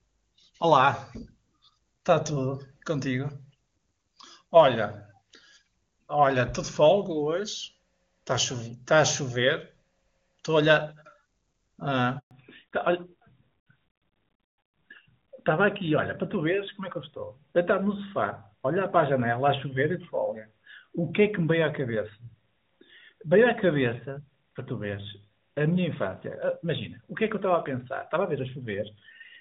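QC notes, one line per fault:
12.19–12.31 s, handover gap: the speech just drops out for about 120 ms and then comes back. That's the call being passed from one network to another, with no speech frames getting through while the switch happens. The sound dies off within a few tens of milliseconds instead of cutting mid-waveform, and whatever was said in that window is gone. The silence ends once the new link starts carrying frames.
12.31 s to end, fallback to narrowband: right after the gap the speech loses all its top end. Nothing above 4 kHz is left, so it goes duller and rougher for the rest of the clip. Before the handover the call was running as HD Voice (AMR-WB), and that section sounds clean, which fits the top 23.85 kbit/s rate. Afterwards it has dropped to the older AMR-NB codec, which points to 12.2 kbit/s.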